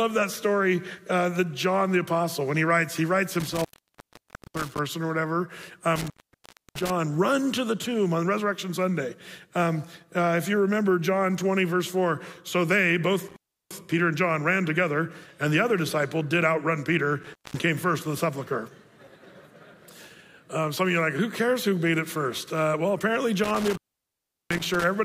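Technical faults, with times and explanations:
3.40–4.79 s, 5.96–6.90 s, 13.28–13.73 s, 17.23–17.60 s and 23.44–24.84 s, intermittent contact: a loose plug or cable briefly opens the line for about 0.90, 0.66, 0.34, 0.20 and 0.73 s, so the sound cuts out with crackle as contact breaks and remakes.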